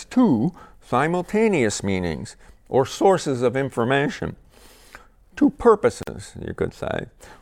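At 6.03 s the speech drops into a 45 ms silence, a gap at a join of encoded pieces, where separately encoded segments were spliced without trimming their start delay and end padding. On a waveform it's a flat notch with smeared edges; spectrograms show a vertical blank band before the sound resumes unchanged.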